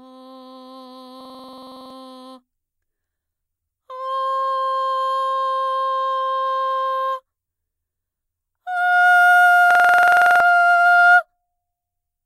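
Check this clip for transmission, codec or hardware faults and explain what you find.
Two system hang loops interrupt the music, at 1.21–1.90 s and 9.71–10.40 s. Each time, the host stalls while the hardware replays one 46 ms buffer, which fits a 2048-sample buffer, 15 times at 21.5 Hz. The result is a rapid buzzy stutter replacing about 0.7 s of audio.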